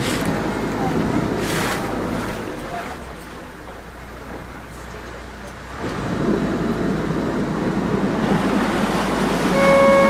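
From 1.77 to 4.87 s, a call bitrate drop from 64 to 23 kbps coarsens the coding without any gaps, unlike packet loss, then clears.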